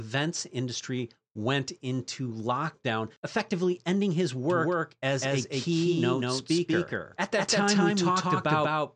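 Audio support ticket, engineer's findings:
Doubled audio track from 4.50 s to the end, right after "lockdown effectively ending his". A second full-band copy of the speech runs about a fifth of a second behind, at roughly the same level as the original. No decay, no room colour. It sets in abruptly, so it is not an echo. Likely cause: a second, slower capture path mixed in, or an edit leaving two misaligned copies stacked. Check routing and the timeline from 4.50 s.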